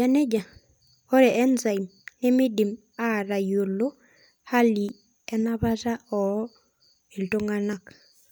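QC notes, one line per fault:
4.89 s and 7.73 s, dropped buffer (overrun): a sudden jump in the speech, with no gap or silence; the first skips only a few milliseconds, the second around 10 ms. Likely the recording missed a buffer before it was overwritten, splicing the surrounding audio together.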